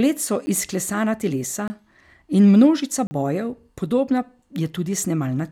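The speech drops out three times with a hard edge each time. At 0.46 s there is a brief tick from a 10 ms gap. From 1.68 to 1.70 s a 22 ms gap sounds like a pop. From 3.07 to 3.11 s a 40 ms gap becomes an audible short hole. Each is a block of digital silence, where a run of samples has been replaced by zeros with no fade. This points to the output buffer not being filled in time.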